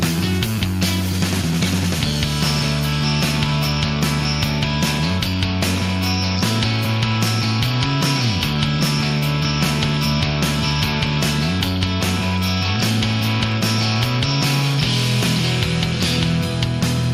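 No technical faults are audible.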